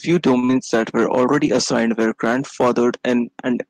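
At 0.39 s the speech hits a short stall from a late packet. A packet turns up late, and the jitter buffer runs dry. The receiver holds the last sound for about 32 ms until the packet lands. Then playback resumes from the same point. Nothing is lost. The sound is simply stretched, with a faint buzz or dip, and everything after it sits 32 ms later.

Right after, from 0.45 s to 0.51 s, comes a short concealed packet loss. This time 40 ms of audio never reaches the decoder in time, so it is gone. The receiver bridges the gap by carrying the last sound forward. Voiced sound continues at its pitch, and unvoiced sound becomes shaped noise. Then it blends back into the real signal. The result is a brief smear or wobble, and a short consonant may drop out.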